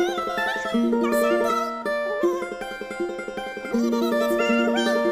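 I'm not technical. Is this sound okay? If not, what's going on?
No. The whole clip has audio read two samples at a time (double speed). It plays twice as fast and a full octave higher. A plain pitch shift would keep the timing; here speed and pitch rise together.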